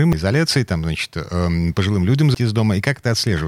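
At 0.13 s and again at 2.35 s, the speech is broken by a brief burst of damaged data in the compressed stream. Each time, part of the encoded stream is corrupt, so the decoder misreads the affected frame, loses sync and hunts for the next valid frame header before playback resumes. Both events are short enough to register at a single instant, and each is heard as a clipped chirp or blip.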